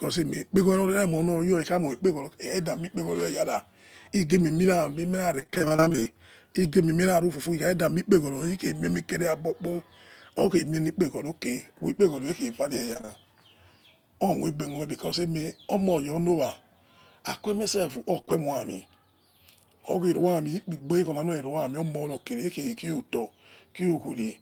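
From 5.39 to 6.18 s, repeated packet loss (robotic sound): 18 gaps, none longer than 25 ms, are each filled by extending the preceding sound. Nearly half the span is synthetic, giving choppy audio with pieces missing. The same pattern returns from 12.94 to 13.10 s with four gaps.

Just after "aikue mie sef", a lost packet is rebuilt from error correction at 18.18 s. The following packet supplied a low-bitrate copy, so the 20 ms plays without a gap but sounds rougher and noisier. Further rebuilt frames follow at 18.29 and 22.99 s.

Between those first two rebuilds, from 18.22 to 18.29 s, come two consecutive short concealed packet losses, each missing 20 ms. The decoder extrapolates from the last audio and then blends back in, producing a brief smear or wobble within a busy stretch of damage.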